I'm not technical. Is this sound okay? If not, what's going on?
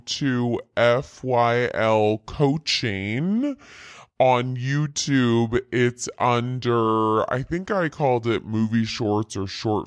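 No. There is a wrong sample rate fault running the whole way through, from the first moment to the last. The speech plays at about 69% of its proper speed, so everything sounds slow, deep and heavy, roughly six and a half semitones lower than normal, like a record on the wrong setting. Speed and pitch drop together, which fits audio recorded at 32 kHz but played back as if it were 22 kHz, without any conversion.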